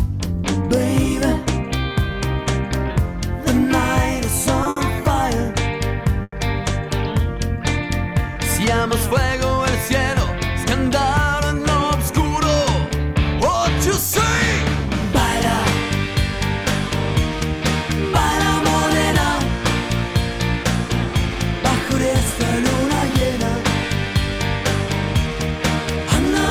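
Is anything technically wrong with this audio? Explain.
Yes, there are two kinds of fault. The first is a pair of short stalls from late packets, at 4.63 to 4.67 s and 4.69 to 4.78 s. Each time a packet missed its slot, the jitter buffer ran dry and the receiver held the last sound, for 20 ms and then 70 ms, so the sound drags slightly with a faint buzz or dip before resuming where it left off.

The second is a call audio freeze from 6.22 to 6.34 s, likely caused by packets held up in transit emptying the jitter buffer. The receiver fills about 100 ms, stretching the last sound into a fading buzz or hiss that falls to roughly 30 ms of silence. The audio then picks up from the same point, so a gap is inserted and nothing is lost.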